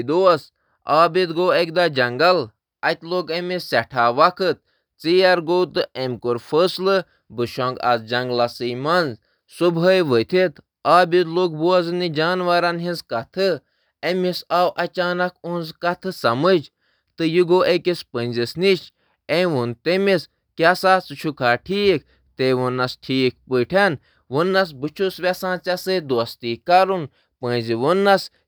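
No technical faults are audible.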